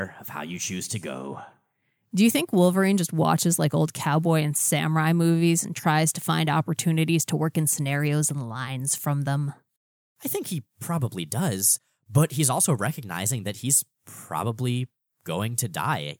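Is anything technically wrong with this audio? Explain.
Yes. There is one fault, an unreliable data bit, from 13.35 to 13.85 s. For that half second, one bit in the sample data is flipped at random in some of the samples. Each wrong sample jumps by the same fixed amount, about -40 dBFS. The jumps land at random moments. Together they form a steady crackle or fizz laid over the speech. It stops abruptly at 13.85 s.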